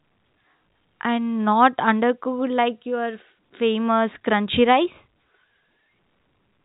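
No faults can be heard in this speech; it carries the narrow band of G.711 A-law telephone coding, with nothing above about 3.8 kHz and at most a faint level-following hiss from the coding.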